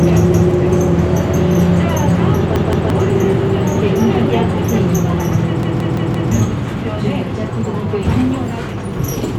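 Repeated buffer: new audio arrived late, so the device replayed its last 171 ms block, which fits an 8192-sample buffer. That block stutters back with hard joins once at 0.34 s, twice at 2.56 s and four times at 5.63 s, dropping roughly 0.15, 0.3 and 0.7 s of sound.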